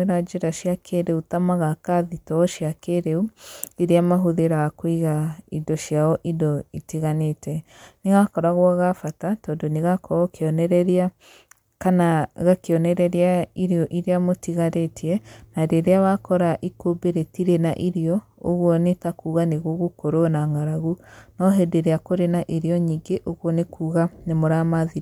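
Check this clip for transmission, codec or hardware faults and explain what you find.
No faults found here.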